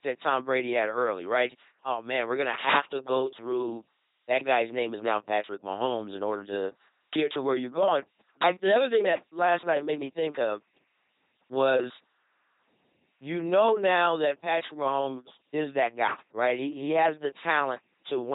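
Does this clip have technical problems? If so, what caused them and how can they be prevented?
Yes. Throughout, an LPC-10 vocoder replaces the speech with a pulse train or noise through a short filter, giving heavy robotic buzz, which fits a 2.4 kbit/s coder. A spectrogram shows rigid harmonic striping and nothing above 3.8 kHz. Prevent it by sending the audio through a modern, higher-bitrate speech codec instead.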